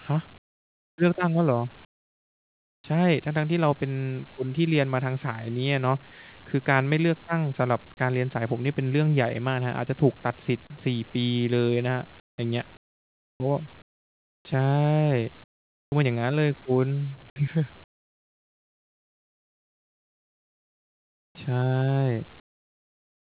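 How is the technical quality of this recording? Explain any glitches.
The speech pauses lose their real room sound. It is replaced by comfort noise in place of the background. The whole recording is band-limited, with nothing above 4 kHz, which fits a narrowband call codec such as G.711 A-law at 64 kbps.

Comfort noise in place of the background occurs at 0.38–0.98 s, 1.85–2.84 s, 12.2–12.38 s, 12.77–13.4 s, 13.82–14.45 s, 15.44–15.92 s, 17.84–21.35 s, and 22.4 s to the end. In each gap, the natural background, which sits about 28 dB below the loud passages, turns into a flat, textureless hiss. It is mostly much quieter, dropping by about 8 to 34 dB, and the longest stretch lasts about 3.5 s. The likely cause is discontinuous transmission: the sender went silent when no speech was detected, and the receiver filled each gap with synthetic noise that only roughly matched the background's shape.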